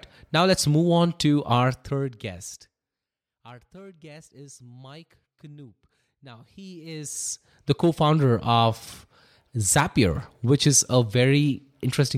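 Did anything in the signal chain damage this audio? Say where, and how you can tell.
Yes. Zipper noise at the gain stage, 6.54 to 7.76 s, before "co founder of". A roughly 25 dB level move in about 150 unsmoothed steps per second ticks audibly.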